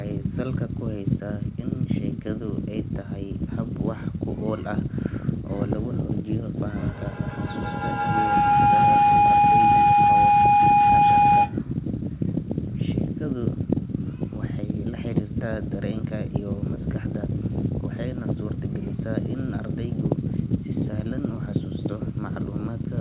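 At 6.77 s a feedback howl starts up and runs until 11.65 s. Two devices in the same room are on the call, so the sound keeps going mic to speaker and back with a bit more gain each time. The repeats pile up and narrow toward somewhere around 700 Hz, pulsing at roughly 150 ms, and peak about 8 dB over the speech. It all sits under a 4 kHz ceiling that points to a G.711-style call path.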